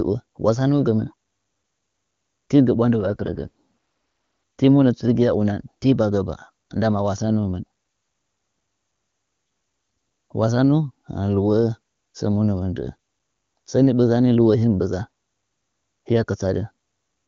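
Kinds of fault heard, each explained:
AMR rate drop: Right after "tigɚ ɓwandɨ", from about 3.00 to 3.48 s, the speech turns rough and synthetic, which sounds like the AMR-WB link stepping down from around 23.85 to roughly 8.85 kbit/s, with fewer bits for the voice itself. The band stays put and nothing drops out.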